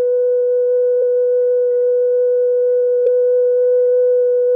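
Compressed frames skipped, from 3.05 to 3.09 s. Here the decoder never outputs a short run of the encoded music, either because those frames are absent from the stream or because they were rejected as corrupt. Playback jumps ahead by about 20 ms.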